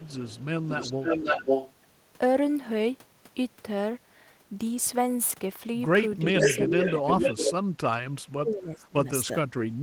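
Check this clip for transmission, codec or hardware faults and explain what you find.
There are two kinds of fault in this speech clip: echo leak and speech suppressed in double talk.

Echo leak appears from 0.0 to 0.45 s, 0.63 to 1.73 s, and 6.26 to 7.53 s. A delayed copy of the speech comes back. The delays are 372 ms, 532 ms and 444 ms. The first echo is faint, around 25 dB below the speech. The later two are roughly as loud as the speech itself. The likely cause is a far-end loudspeaker whose echo canceller let its microphone's pickup through.

Speech suppressed in double talk occurs from 6.26 to 7.23 s, 7.58 to 7.92 s, 8.3 to 9.07 s, and briefly at 9.26 to 9.31 s. The speech dips or breaks up in pieces. The drops are shallow in the first stretch, roughly 10 dB. They are much deeper in the middle two, around 30 to 35 dB, almost cutting out. The last is a slight dip. The likely cause is an echo canceller that could not tell talker from echo during overlap, and turned both down.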